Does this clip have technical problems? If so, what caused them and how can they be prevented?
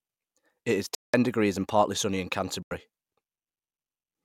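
Yes. Bluetooth stalls at 0.95 to 1.14 s and 2.63 to 2.71 s drop the speech to silence for about 0.19 s and 85 ms, then resume. Radio interference likely delayed packets, draining the headphone buffer until resent data arrived. Keeping the phone close, with a clear line of sight and away from busy 2.4 GHz sources, prevents this.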